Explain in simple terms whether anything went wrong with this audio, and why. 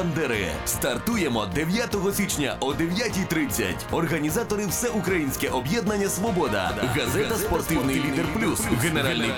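A doubled audio track starts abruptly at 6.70 s and runs to the end. From that point the sound is heard twice: a second, somewhat quieter copy trails the original by about a fifth of a second, like a flat, instant echo with no room sound around it. This likely happened because the same audio was picked up again through a slower route, or an edit left two copies slightly out of line.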